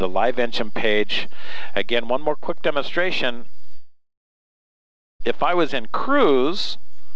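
Call audio freeze, 3.74 to 5.22 s: the sound stalls into a fading buzz, then about 1.1 s of silence, likely from a jitter buffer starved by delayed packets. It resumes where it stopped, with nothing lost. Throughout, nothing is heard above 8 kHz, which fits G.722 at 64 kbps.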